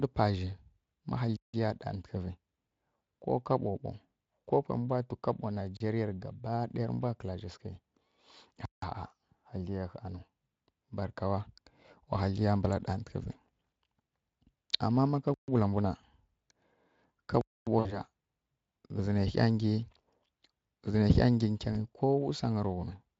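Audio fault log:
1.37–1.54 s, 5.77–5.80 s, 8.65–8.82 s, 15.34–15.48 s, 17.41–17.67 s: block of digital silence. The sound drops abruptly to silence and comes back with no fade. The two 171 ms holes fit an 8192-sample buffer left unfilled. Unlike concealment, nothing fills the gap.
17.79–17.99 s, 21.73–21.77 s: VoIP packet loss concealed by the speech codec. About 60 ms and 20 ms were lost. Rather than silence, the decoder extrapolates a buzzy tone or coloured noise that fades, and the sound stays weak for a moment afterward.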